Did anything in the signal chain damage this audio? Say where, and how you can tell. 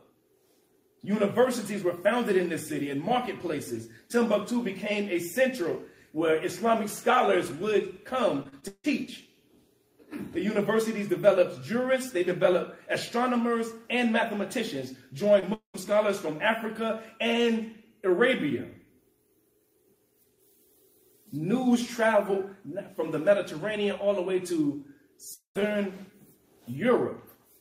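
Yes. The damage sits in the network stage of a packetised call, where audio went missing in transit and the receiver's concealment tried to cover it.

From 8.43 to 8.86 s there is repeated packet loss with a robotic sound. Four separate gaps fall inside that span, the longest about 159 ms, and roughly half the stretch is synthesised rather than received. Each hole is bridged by extending the preceding sound, and the next loss arrives before the audio settles. That produces the choppy, mechanical texture.

At 15.40 s there is a short concealed packet loss. About 20 ms never arrived, and the decoder stretched the prior sound across the hole before blending back into the real signal. It is heard as a brief smear or wobble rather than a clean gap.

Two long network dropouts follow, one at 15.54–15.76 s and one at 25.34–25.57 s, each losing about 200 ms. In each, the last sound is carried forward and decays into roughly 0.1 s of silence before the signal resumes with that portion gone. 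The shape matches receiver-side concealment, and the likely cause is a burst of lost network traffic.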